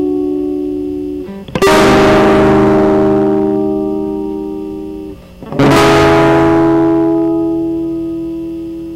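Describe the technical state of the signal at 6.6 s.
At 6.6 s the music is in hard clipping, which runs from 5.53 to 7.33 s. Driven about 24 dB past the limit, every peak is sliced flat, adding harsh upper harmonics, so all loud material turns to fuzz, not the warmer rounding of soft saturation.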